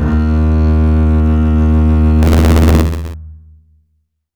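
From 2.22 s to 3.14 s, the music carries buffer tearing. A robotic buzz rattles at 86.1 Hz, which fits a 512-sample buffer. Writer and reader have slipped. About a tenth of each period holds audio roughly 20 ms stale, with hard joins.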